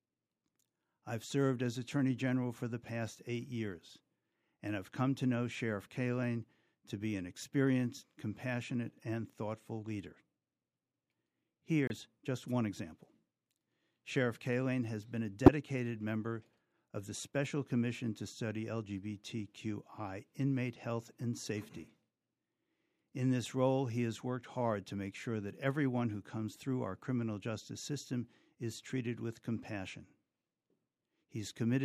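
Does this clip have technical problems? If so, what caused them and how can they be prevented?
Yes. The speech has two corrupt frame decoded faults. At 11.87–11.93 s a short burst of misplaced energy spans about two codec frames and peaks around -25 dBFS. At 15.46–15.49 s a sharper blip hits about one frame and is much louder, near -10 dBFS. In each case damaged bits reached the decoder, which played the frame anyway with wrong gains or codes. Adding checksums and concealing frames that fail them would prevent this.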